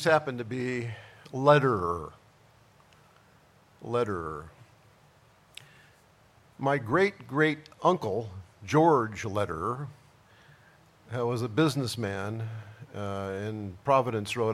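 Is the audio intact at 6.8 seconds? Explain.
Yes, the audio is intact at 6.8 seconds, with no dropout, click, distortion or other fault audible at that point.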